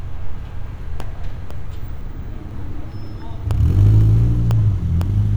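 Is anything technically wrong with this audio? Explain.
Yes. From 0.50 to 5.01 s there are periodic USB or driver dropouts: every 0.5 s something stalls the driver and roughly half a millisecond of audio drops to silence, about ten times in all, giving a steady, evenly spaced tick under the sound.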